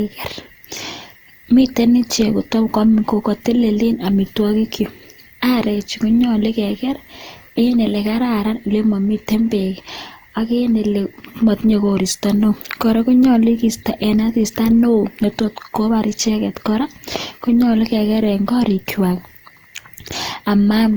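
From start to finish the speech carries generation loss, most likely from being run through an Opus codec at around 48 kbit/s several times over, perhaps four. Each re-encode quantised the signal afresh on a shifted frame grid, so the errors stacked up: the sound is swirly, smeared and hollow, with consonant onsets softened. A spectrogram would show blurred transient edges, with nothing above 20.3 kHz.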